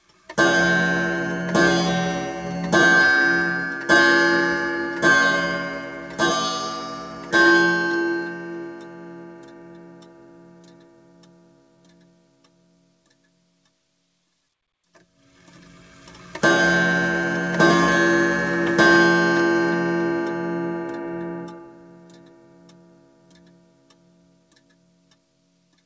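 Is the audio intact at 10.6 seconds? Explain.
No. At 10.6 s the audio sits inside a stretch from 8.22 to 13.12 s where the sound was cut by the noise suppressor. The suppressor judged this sound to be noise and pulled it down, by about 9 dB at its deepest. Held and decaying parts sink and their tails are clipped short, while sudden onsets still come through. Unlike a plain level dip or a dropout, the loss follows the character of the sound rather than falling evenly across everything.

Underneath that, the whole clip suffers from a noise suppressor applied to music or sounds. This speech-oriented processing keeps treating sustained tones and ambience as noise, swinging the level by around 15 dB, so the audio pumps and thins. A compressor reacts to loudness. This behaves differently: it tracks how steady the sound is, so attacks survive and sustains fade.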